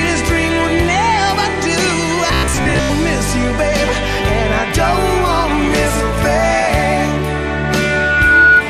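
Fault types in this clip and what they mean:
Robotic sound from repeated short buffers: from 2.28 to 2.90 s the sound hardens into a rigid, metallic buzz pitched at about 66.7 Hz while still loosely tracking the original contour. That pitch matches a loop about 15 ms long, so the likely cause is fresh audio arriving too late and the playback repeating its last 15 ms chunk, covering roughly 70% of the stretch while the real material between repeats is skipped.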